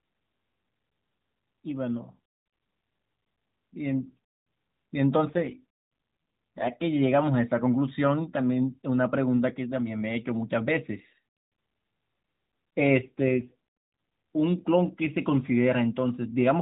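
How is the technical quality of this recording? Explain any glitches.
The recording is narrowband mobile-call speech with nothing above 4 kHz, and it has two short AMR rate drops. From 5.28 to 6.74 s and again from 13.02 to 13.54 s, the codec falls to a much lower rate, which fits a step from 12.2 to 4.75 kbps, likely as the network trades speech bits for error protection on a weak link. The band stays the same and nothing drops out, but the speech turns rougher, buzzier and more synthetic until the rate recovers.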